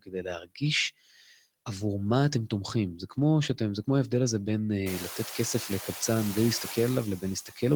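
Noise suppressor artifacts run through the whole clip: steady background gets pulled down by about 11 dB between phrases. Right at the start there's speech cut by the noise suppressor, from 0.02 to 0.25 s (dipping about 17 dB) and again from 0.42 to 0.62 s (about 20 dB). In each stretch, roughly a tenth of a second of soft sound gets treated as noise and swallowed. Around 5 s the room noise climbs by about 24 dB and then sits about 14 dB under the speech. At 7.46 to 7.62 s the suppressor clips the tail again, about 10 dB down, leaving the ending faint.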